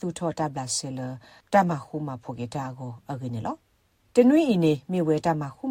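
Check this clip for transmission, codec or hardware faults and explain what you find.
No transmission, codec or hardware faults can be heard in the clip. Nothing in the audio calls for further explanation.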